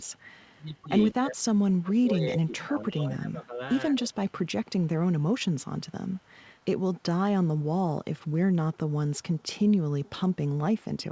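Speech suppressed in double talk, 1.11 to 1.48 s: the voice drops by roughly 30 dB. The likely cause is the echo canceller turning everything down while both sides talked at once.

Echo leak, 1.71 to 1.79 s: a faint copy of the voice, about 35 dB below it, arrives 162 ms late. This is likely loudspeaker pickup that the far-end canceller failed to remove.

Speech suppressed in double talk, 1.8 to 4.24 s: the voice dips by around 20 dB across about two seconds. The likely cause is again overlapping talk confusing the canceller.

Echo leak, 4.3 to 4.87 s and 5.2 to 6.67 s: a quieter delayed copy, about 40 dB down and 162 ms behind, is likely residual echo passed back uncancelled.

Throughout, nothing is heard above 8 kHz, consistent with a G.722 call path.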